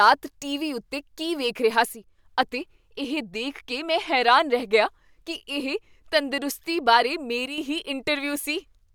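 The speech abruptly dips by about 6 dB from 1.85 to 2.19 s, after "ਉੱਤੇ ਕੀ ਦੇਖ ਰਿਹਾ", and again from 7.46 to 7.58 s, after "ਇਹ ਤੰਦਰੁਸਤੀ ਬਾਰੇ". The likely cause is one channel dropping out before the stereo is summed to mono.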